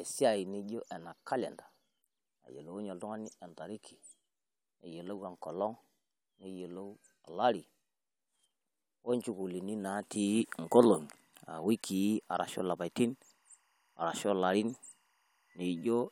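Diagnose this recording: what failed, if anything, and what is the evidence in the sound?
Timecode bleed from 11.05 s to the end: a faint warble near 1 and 2 kHz, 23.976 fps timecode leaking through adjacent analogue wiring.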